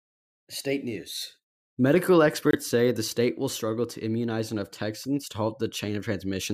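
At 2.51 to 2.55 s the speech cuts to silence with abrupt edges, a Bluetooth dropout. A packet likely failed to reach the headphones in time, consistent with one lost frame of about 23 ms, and the speech resumes further along, as if it had continued.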